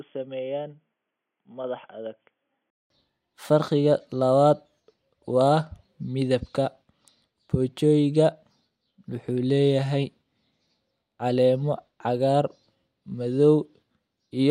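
Until 2.90 s speech stops near 3.4 kHz and sounds quieter, likely an input switched to a poorer device; the 200 ms gap points to a switch rather than filtering.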